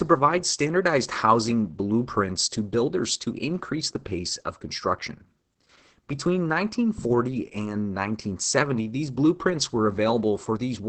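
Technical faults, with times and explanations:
Throughout, Opus voice compression: the speech is coded with the SILK linear-prediction coder in its wideband setting, so nothing is heard above about 8.6 kHz and sibilants sound dull and muffled. Heavy coding damage, in line with a bitrate near 10 kbps, leaves too few bits for the excitation signal. The result is a hoarse, buzzy and slightly robotic speech texture.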